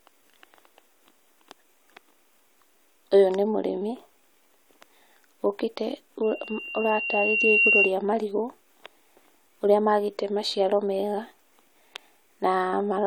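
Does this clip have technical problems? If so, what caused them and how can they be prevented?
Yes, there's a loudspeaker feedback squeal from 6.23 to 7.95 s. The mic is catching the speaker it feeds, and the loop runs away at 2.8 kHz, swelling over about a second and a half to roughly 5 dB above the speech. Pulling the mic back, turning it away from the speaker, or notching 2.8 kHz would stop it.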